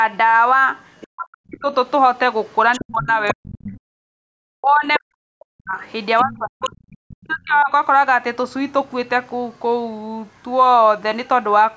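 An echo canceller that likely failed to remove the far end's loudspeaker sound lets the other side's voice leak through at 1.01 to 1.52 s (about 25 dB below the speech), 2.47 to 3.7 s, 4.93 to 4.99 s (a brief scrap only about 10 dB down) and 5.83 to 7.62 s, where the leaking voice sits about 15 dB under the talker.

Where both sides talk at once, the canceller likely can't tell the local talker from the echo and turns everything down. The result is speech suppressed in double talk. The speech dips by as much as about 40 dB, briefly from 1.05 to 1.71 s and in a longer broken stretch from 2.77 to 7.71 s, where it cuts in and out for around three seconds in all.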